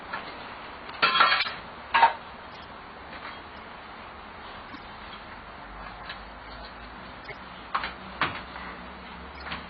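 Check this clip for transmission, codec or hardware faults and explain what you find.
The clip has six short bursts of corrupt frame decoded, at 1.41–1.49 s, 2.52–2.64 s, 3.54–3.59 s, 4.68–4.79 s, 7.23–7.33 s and 9.35–9.43 s. Each is a chirpy, squeaky blip of misplaced energy lasting roughly a few frames. Damaged bits were decoded as if valid, so wrong gains or codes put energy at the wrong frequencies. The first burst is loud, around -10 dBFS. The rest sit much lower. Unlike a dropout or concealed loss, the sound doesn't smear: something foreign is added.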